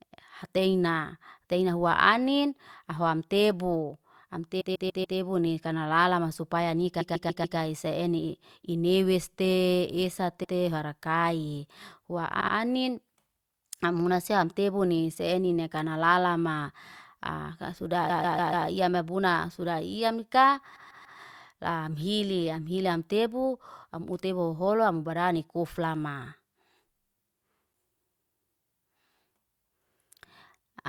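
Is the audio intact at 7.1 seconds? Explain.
No, at 7.1 seconds you're inside a stretch of repeated frames running from about 7.00 to 7.57 s. A 144 ms block of speech gets played four extra times, which fits a run of six compressed frames being sent more than once, so the decoder just loops it. You hear a quick stutter, and the clip stretches by 576 ms.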